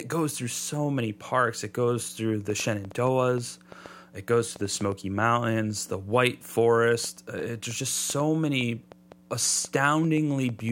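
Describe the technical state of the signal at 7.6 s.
At 7.6 s the speech lies within a train of clicks running from 2.50 s to 10.7 s. Some 30 alike pulses pop at an uneven pace, about 3.4 per second, near speech level, even in pauses. Likely cause: interference, or a faulty connection or supply.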